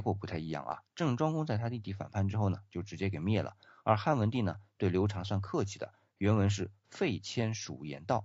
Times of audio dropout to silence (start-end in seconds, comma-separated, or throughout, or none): none